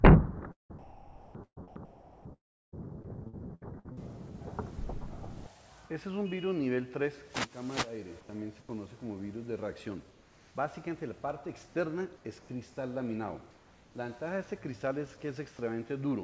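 Audio carried over a call path, band-limited with nothing above 8 kHz, which fits a wideband codec such as G.722. From 0.52 to 2.74 s the sound is chopped by the voice detector: about 1.7 s of quiet edges and low-level passages drop out to a smoother synthetic hiss, likely because the sender's detector kept toggling transmission and the receiver filled the gaps with comfort noise. From 3.02 to 3.99 s repeated packet loss gives a robotic texture, with five holes (the longest 64 ms) patched by stretching the preceding sound, so about a quarter of that second is concealed. Comfort noise likely replaces the background at 8.21 to 8.29, 8.61 to 8.69, 10.11 to 10.55, 12.17 to 12.49 and 13.51 to 13.95 s. The real ambience there, about 26 to 29 dB below the loud parts, gives way to a flat, featureless noise roughly 2 to 3 dB quieter.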